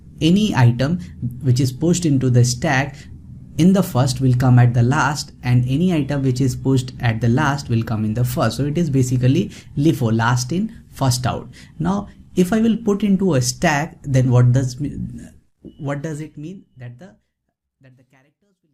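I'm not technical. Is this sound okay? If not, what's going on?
Yes, nothing is wrong.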